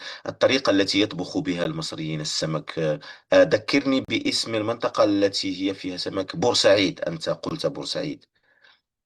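At 1.64 s, from 4.05 to 4.08 s, and at 7.49 s the speech breaks into brief silences of about 15, 37 and 19 ms: gaps at a join of encoded pieces, where encoder start delay and final-frame padding were left untrimmed. Unlike a dropout, nothing is lost. Speech resumes exactly where it stopped, with smeared edges.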